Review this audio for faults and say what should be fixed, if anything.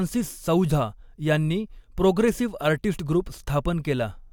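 No faults; nothing needs fixing.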